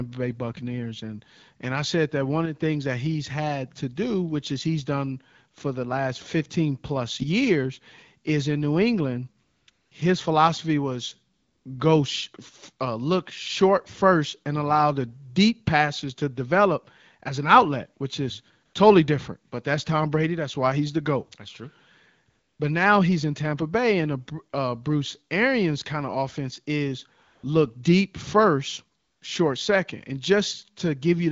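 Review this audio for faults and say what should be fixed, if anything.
AMR comfort noise at 9.43–9.67, 9.71–9.91, 11.33–11.65 (after "philosophy was"), 18.65–18.73, 22.29–22.59, 27.23–27.43 (between "kind of offense is" and "look deep first short") and 28.99–29.21 s (before "short second"). During these gaps of 80 to 320 ms, the sender judged the talker silent and stopped sending speech frames. The receiver substituted smooth synthetic noise, which switches in and out against the real background.

To prevent it, disable discontinuous transmission or make voice activity detection less aggressive, so that short pauses keep real frames.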